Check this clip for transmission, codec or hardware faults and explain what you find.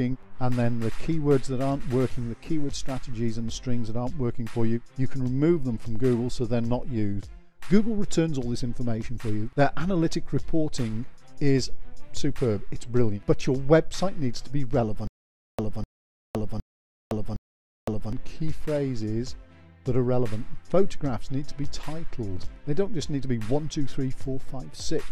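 There is one fault. From 15.07 to 18.13 s there is a stutter with silent gaps: a 251 ms fragment repeats four times, each followed by 512 ms of digital silence, on a steady 763 ms cycle. This is likely a stalled stream replaying its last buffer on each retry, so the intervening audio is lost.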